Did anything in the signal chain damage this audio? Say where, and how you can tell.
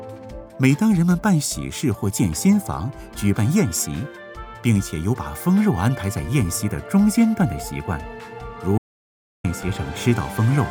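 Yes. There is an audio dropout to silence from 8.78 to 9.44 s, about 0.66 s of missing audio. The sound stops mid-flow and comes back just as abruptly, and the gap holds silence with no room tone or noise floor. The likely cause is an input-side loss, such as a momentary disconnect, link failure or mute, while the recorder kept writing silence. On a waveform it is a flat line. On a spectrogram it is a fully black vertical band with hard edges.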